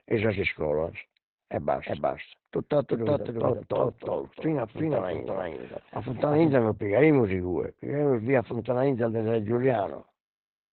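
Speech, with heavy Opus voice compression from start to finish. Nothing is present above about 4.2 kHz, so the voice sounds narrowband and muffled. The coarse linear-prediction coding makes it hoarse and slightly robotic, which fits SILK at roughly 8 kbps.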